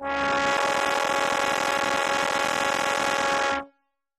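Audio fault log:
throughout: AAC compression. The music sounds dull and smeared, with plainly audible codec damage: sustained tones warble or fizz. This points to AAC-LC at a low bitrate, something like 32 kbps, as the likely cause. To save bits, the encoder coarsely quantises its frequency lines, so fine detail is lost and some bands become noise. On a spectrogram the energy stops flat at 14 kHz, with patchy holes below it.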